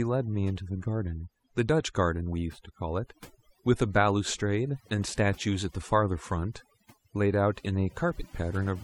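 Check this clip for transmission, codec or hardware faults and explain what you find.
One fault runs through the whole clip: overdone noise removal. A noise reduction stage set far too aggressively shuts off individual frequency bands that sit near its noise estimate, taking quiet parts of the speech along with them. Pauses drop to near silence with twinkling specks.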